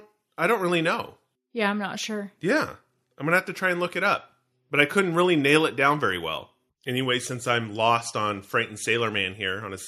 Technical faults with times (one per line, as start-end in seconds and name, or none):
none